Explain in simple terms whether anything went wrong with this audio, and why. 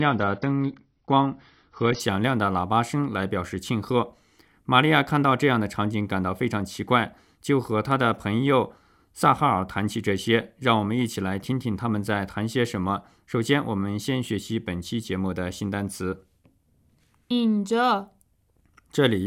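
Adaptive stream starting at a low bitrate, 0 to 2.0 s: the player began on a low-quality version, so nothing above 6.6 kHz, then jumped to a clearer one without a gap.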